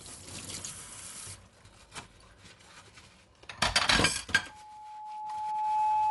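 Dolby Digital compression is the likely cause of the dull, band-limited sound that runs through the whole clip. Nothing is present above 11.4 kHz, and the remaining content has a plainly audible rough, fluttering grain. That fits an AC-3 style encoder at a low bitrate, around 64 kb/s. It narrows the bandwidth and leaves many frequency lines without mantissa bits, so the decoder fills them with noise instead of the real detail.

A loudspeaker feedback squeal starts at 4.49 s and continues to the end at 6.10 s. A microphone was picking up the loudspeaker it fed, and at 855 Hz the loop gain went above one. That single tone feeds on itself, swelling over roughly one and a half seconds into a howl that ends up about 5 dB above the rest of the sound.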